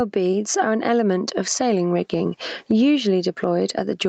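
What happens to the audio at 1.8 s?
At 1.8 s the speech is caught in gain pumping that runs through the whole clip: the level ducks under each loud syllable, a swing of around 15 dB. This is likely a microphone gain set far too high, with a fast limiter clamping every peak. On a waveform the envelope looks squashed, peaks flattened and pauses raised; a spectrogram shows a band that ends at 8 kHz as the call path allows.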